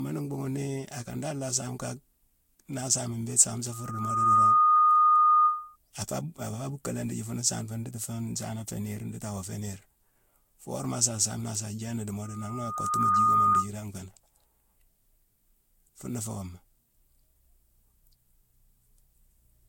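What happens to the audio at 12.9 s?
At 12.9 s a loudspeaker feedback squeal is in progress, running from 12.22 to 13.69 s. A microphone is picking up its own loudspeaker, and at 1.2 kHz the loop gain exceeds one, so that single tone swells over about a second to roughly 10 dB above the programme.

Underneath, the speech is swirly, smeared and hollow, with nothing above 16.6 kHz. This generation loss is likely from the audio being re-encoded about three times with a lossy codec, consistent with Vorbis near 60 kbit/s, each pass adding fresh quantisation damage.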